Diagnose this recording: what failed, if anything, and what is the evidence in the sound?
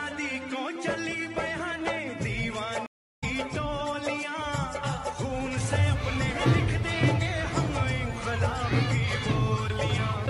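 The network connection dropped and the player performed a stream reconnect, starting a fresh decoder mid-stream. At 2.86 s the audio cuts to 0.31 s of silence, and when it returns at 3.24 s it picks up roughly a third of a second further on, so that stretch of material is simply missing.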